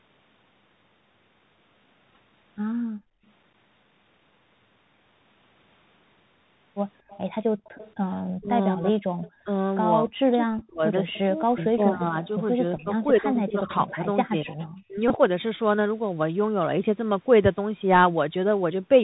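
Throughout the speech, the Bluetooth CVSD headset codec at 64 kbps clearly narrows and roughens the sound. Nothing passes above 4 kHz, s sounds turn scratchy, and a granular hiss sits under the voice. Unlike a packet fault, this texture never comes and goes.

At 2.11 to 2.17 s, a Bluetooth headset packet repeat replays lost voice packets, about 22.5 ms scattered over 52.5 ms, in short runs of a few milliseconds. The runs are too brief to build the steady 267 Hz buzz, so they come through as small ticks.

From 2.84 to 3.24 s, the background gated by the echo canceller drops by about 31 dB. The room sound vanishes while the canceller clamps the microphone, then returns. A shallower dip of about 17 dB occurs at 7.49 to 7.64 s.

An echo leak appears at 7.08 to 7.94 s, 9.22 to 9.31 s, 11.08 to 11.62 s and 13.7 to 14.64 s. A copy of the voice trails by about 232 ms at roughly 20 to 25 dB below the speech. 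It is likely echo that a loudspeaker side's canceller failed to remove. The fixed lag separates it from room reverberation.

Speech suppressed in double talk dips the talker by roughly 35 dB across 8.38 to 9.49 s and by about 40 dB across 10.03 to 14.96 s. The voice dips, likely because both sides spoke at once. Here the voice itself fades, unlike the background gating.

Further packet repeats come at 10.59 to 10.63 s (18.8 ms lost over 30 ms) and 15.08 to 15.11 s (18.8 ms), with a single small tick at 12.77 s.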